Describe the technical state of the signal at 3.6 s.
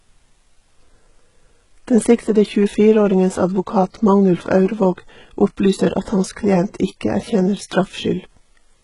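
At 3.6 s, as throughout the clip, heavy HE-AAC compression is likely at work. The treble is rebuilt from copied lower bands, which fits a bitrate near 12 kbps, so nothing sounds above 11.1 kHz and s sounds turn gritty and lispy.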